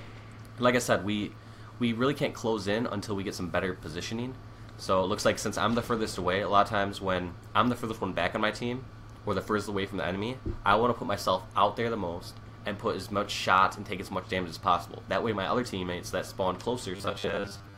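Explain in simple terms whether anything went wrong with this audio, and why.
Right at the end, from 16.96 s to 17.77 s, the sound turns rigid and metallic, with a steady 100 Hz buzz laid over it. That is robotic sound from repeated short buffers. The likely cause is new audio arriving too seldom, so the playback fills the gaps by replaying the same tiny slice, here about 10 ms long, over and over. Most of that final stretch is these repeats, and the fixed repeat rate is what produces the buzz.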